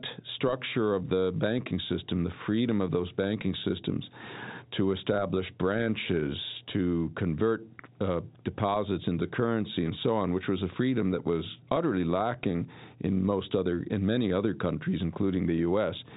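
The speech carries no technical faults in time order to describe; it comes through ordinary G.711 telephone coding, with nothing heard above 3.8 kHz.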